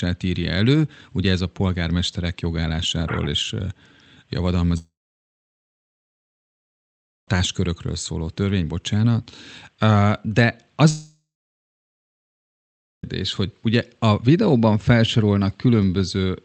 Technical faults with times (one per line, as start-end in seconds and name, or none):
4.77-7.28 long network dropout
10.90-13.04 long network dropout